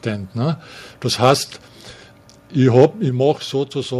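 A speech recording, most likely with its microphone input set too high, so the loudest peaks ran about 4 dB past the converter's limit and were flattened. This microphone overload adds a harsh, crackling edge from 1.23 to 1.32 s and again, more heavily, from 2.75 to 2.85 s, where a larger share of samples is clipped. Shortly afterwards the software likely stepped the microphone volume down: at 3.09 s voice and background both drop suddenly by about 5 dB in a single step.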